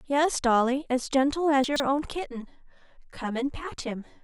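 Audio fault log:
1.64 to 1.8 s, chunks out of order: a 40 ms chunk plays three chunks late, so the speech jumbles briefly at the hard joins.
2.19 s to the end, channel delay (comb filtering): one channel runs around 10 ms late, and summing to mono notches out evenly spaced frequencies from around 50 Hz, so the speech sounds hollow and phasey.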